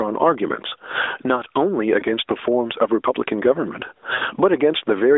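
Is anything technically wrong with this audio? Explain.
Yes, there are two problems. Throughout the speech, the level is pulled down under each loud syllable, a swing of roughly 25 dB. This is gain pumping, with the likely cause being microphone gain set far too high and a fast limiter clamping it down on each peak, which pulls loud and soft closer together and squashes the sound.

At 2.00 to 2.04 s there is a brief dip and warble, and at 4.14 to 4.23 s the speech smears, stretches and fades before recovering thin and rough. These are lost AMR speech frames. When frames fail their checks, the narrowband decoder repeats the last good pitch and vocal tract settings at falling gain. The first gap fits a single 20 ms frame and the second fits about four frames, roughly 80 ms. Throughout, the narrow 300 Hz to 3.6 kHz mobile band can be heard.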